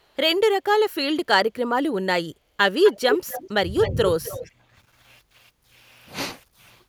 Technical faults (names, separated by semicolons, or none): echo leak; speech suppressed in double talk